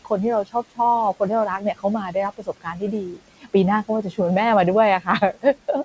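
Noise suppressor artifacts run through the whole clip. The suppressor attenuates bands it judges to be steady noise, frame by frame, so the room noise, about 20 dB below the speech, dips between words and swells under them.

Speech cut by the noise suppressor occurs at 0.44–0.79 s (about a tenth of a second affected, dropping up to about 17 dB), across 1.59–4.19 s (around 0.7 s in total, up to about 19 dB), and from 5.0 s to the end (up to about 18 dB). Speech mistaken for noise is pulled down with the background and sounds swallowed or faint.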